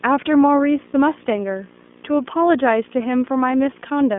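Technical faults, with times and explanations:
throughout: video or display buzz. A buzz at 59.94 Hz, the picture's field rate, sits about 20 dB below the speech with hash above it and a 15.7 kHz line-rate whine. The whine and the rate just below 60 Hz distinguish it from plain mains hum.
throughout: iLBC codec. The speech is confined to roughly 200 Hz to 3.5 kHz, with nothing above 3.7 kHz, and sounds plainly rough and synthetic. Each frame is coded on its own, which fits 30 ms frames and the 13.33 kbps mode. The result is a grainy texture rather than the swirly smearing of codecs that predict across frames.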